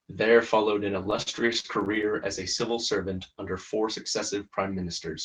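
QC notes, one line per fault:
1.03 to 2.05 s, repeated stalls (stutter): the speech keeps catching on itself here, with twelve brief hiccups packed into about a second. Packets were showing up late or slower than playback, so the jitter buffer kept running dry, and each time the receiver stretched the last bit of sound to cover. That fill adds up to about 173 ms, roughly a sixth of the stretch, with the longest hold 42 ms. Nothing actually drops out, but the audio drags and stammers.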